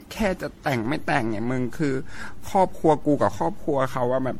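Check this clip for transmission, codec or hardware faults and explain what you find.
Two faults are present: heavy codec generation loss across the whole clip, and a DC step near the start.

Generation loss, throughout: the speech was likely passed through an MP3 encoder many times over, perhaps around ten, each pass re-quantising on a shifted frame grid. The errors compound into a swirly, hollow, smeared sound with softened consonant attacks and nothing above 16.5 kHz, at a coarseness that fits roughly 62 kbit/s per pass.

DC step, at 0.85 s: the waveform's zero line jumps to a new offset and holds it to the end, as when a converter recalibrates or an offset input is switched in. This gives a single low thump at 0.85 s while the speech continues unchanged.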